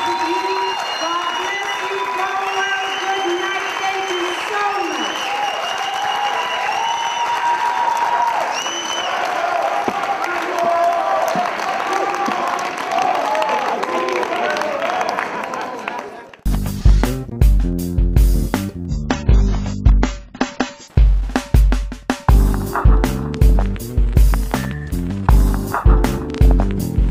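From 18.88 to 20.88 s the adaptive stream drops to a lower bitrate: the sound suddenly loses everything above about 7.6 kHz and turns smeared and watery, consistent with a fall from roughly 96 to 16 kbit/s AAC. The switch back is equally abrupt, with no gap.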